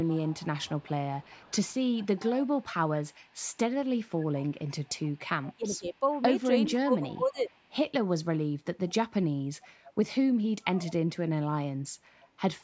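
In this speech recording, an echo canceller at the loudspeaker end likely let part of its microphone pickup through. The result is echo leak: a faint copy of the speech returning 0.41 s late, roughly 20 to 35 dB below the direct sound, from 0.04 to 7.68 s and again at 8.88–9.29, 9.86–9.93, 10.63–10.94 and 12.22–12.27 s. During 5.56–7.5 s, both sides likely spoke at once and the canceller turned down both its own talker and the echo. That is speech suppressed in double talk, with the voice dipping or dropping out by up to about 20 dB across roughly a second in total. The call's microphone processing caps the band at 8 kHz.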